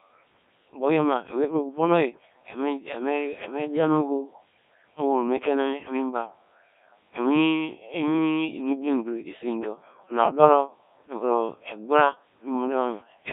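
From start to finish the speech has passed through a Codec 2 vocoder, consistent with its 1.3 kbit/s mode. Only pitch, voicing, energy and spectral envelope survive, resynthesised from sine waves, so the voice sounds heavily robotic and buzzy within a narrow 250 Hz to 3.6 kHz band.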